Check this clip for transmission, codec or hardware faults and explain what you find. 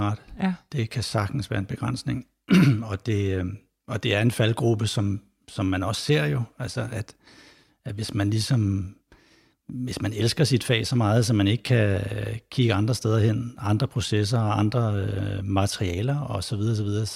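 Nothing stood out on listening to this speech recording.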